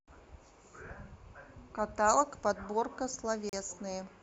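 At 3.49 to 3.53 s, a gap between stream segments leaves a hard-edged silent hole of about 36 ms; unlike a dropout, the speech resumes exactly where it stopped.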